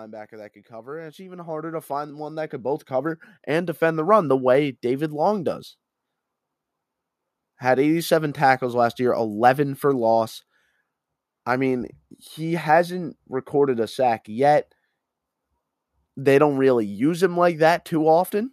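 Speech, and from 0.29 s to 5.34 s the automatic gain is rising: the level creeps up by about 16 dB over those five seconds instead of holding steady. The gain control has decided the input is too quiet and is slowly turning itself up, so the voice and the room noise behind it swell together. That shared lift is the giveaway that it's gain riding, not the talker getting louder.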